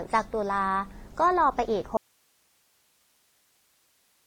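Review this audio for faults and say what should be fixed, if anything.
The speech carries transcoding between lossy codecs throughout. There is nothing above 9 kHz, and two different kinds of coding smear sit on top of each other. The mix fits a WMA encode near 48 kbit/s that was likely re-encoded to AAC-LC at 32 kbit/s, with the second encoder wasting bits on the first one's artefacts. A single low-bitrate encode would give one consistent texture, not two layered ones. To prevent it, encode once from the original source at a sufficient bitrate.

An audio dropout to a faint residue starts abruptly at 1.97 s and lasts to the end. The speech vanishes mid-flow, leaving only hiss at about 40 dB below the signal level. The path after the break stayed live while the signal feeding it was likely lost. A natural pause or a fade-out would not cut off this suddenly. To prevent it, secure the source connection and monitor the input during capture.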